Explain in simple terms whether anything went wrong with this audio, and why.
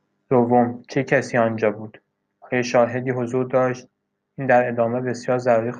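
Nothing went wrong: no dropouts, glitches or distortion are audible anywhere in the speech.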